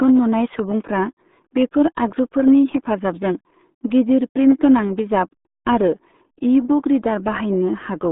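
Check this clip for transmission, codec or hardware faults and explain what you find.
The speech carries one fault that runs from start to finish: RealAudio 14.4 codec damage. A very low-rate speech coder has squeezed the signal into a band of about 150 Hz to 3.6 kHz, with nothing above 3.8 kHz, and its coarse modelling smears the voice into a muffled, gargling texture. The heavy artefacts suggest an 8 kbit/s codec. A plain telephone band-limit would sound similarly narrow but stay clean inside that band. Here the audio itself is mangled.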